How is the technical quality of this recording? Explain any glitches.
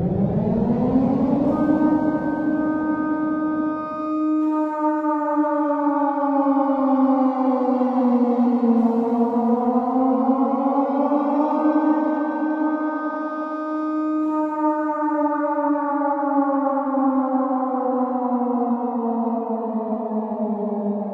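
No glitches or technical faults can be heard anywhere.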